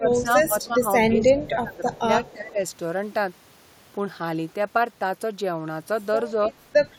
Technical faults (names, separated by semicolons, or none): speech suppressed in double talk; echo leak